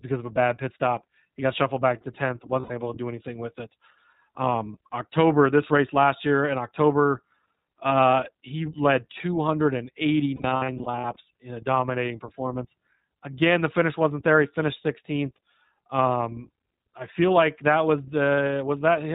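iLBC codec coding runs through the whole speech clip. Each frame's excitation is coded on its own, and everything above 4 kHz is removed, so the voice is plainly rough, slightly synthetic and muffled. The character fits iLBC's 20 ms frame mode at around 15 kbps.

Lost iLBC frames first occur from 2.60 to 2.72 s, a single gap of about 100 ms. The decoder fills it by repeating the last pitch cycle mixed with noise, which gives a brief held, buzzy vowel. The voice is right again almost at once afterwards. From 10.36 to 11.16 s, further losses totalling about 320 ms are scattered in short runs across 800 ms. This produces a stuttering series of breathy, sustained fragments, with normal decoding returning between them.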